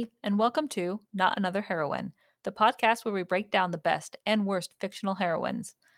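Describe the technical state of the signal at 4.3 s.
At 4.3 s the speech signal is intact, with no audible dropout, clipping, distortion or other fault at that moment.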